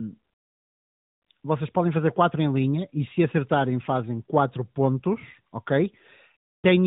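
No technical faults can be heard in this speech, which carries the band-limited character of the AMR narrowband mobile codec at what sounds like its highest 12.2 kbps mode, with only light coding colouration.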